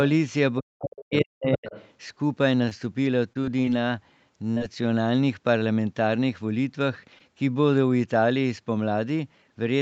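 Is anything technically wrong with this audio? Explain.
Yes. There are four problems, all inside a band that tops out at 8 kHz.

From 0.59 to 1.69 s, the speech is suppressed in double talk. The level sinks repeatedly, by about 40 dB at its deepest, over roughly a second in total. The likely cause is an echo canceller facing two people talking at once. It cannot tell the near talker from the loudspeaker echo, so it turns everything down. The voice dips and drops out in pieces.

From 1.52 to 1.91 s, the other side's voice leaks through. A second voice sits about 15 dB below the main speech. It likely comes from the far end playing over a loudspeaker, with the echo canceller failing to strip all of it from the microphone. It sounds like a faint, separate talker underneath.

From 2.65 to 5.63 s, there are scattered short gaps. Roughly ten small holes appear, each around 20 ms or less. Together they cover about 5 percent of that stretch. 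Packets arrived late or not at all. The receiver filled each hole by extending the last sound. The speech stays clear, but brief ticks and tiny hiccups dot the passage.

From 7.19 to 7.22 s, there is short concealed packet loss. About 20 ms of audio never reached the decoder. The receiver stretched the preceding sound to cover it, then blended back into the real signal. The result is a single quick smear or tick. A short consonant there can lose its edge.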